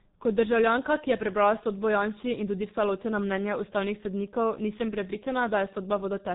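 From start to finish the speech carries the signature of the G.723.1 codec, heavily damaged: nothing survives above 4 kHz, voices turn muffled and hoarse, and consonants smear together, which fits a rate near 6 kbit/s. The coarse 30 ms frames and slow updating of the vocal model blur quick changes. A plain low-pass filter would dull the sound but keep consonants crisp, and that hoarse, smeared quality is what sets this codec apart.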